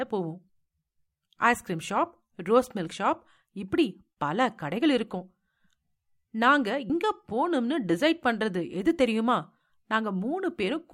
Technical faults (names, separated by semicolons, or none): damaged data in a compressed stream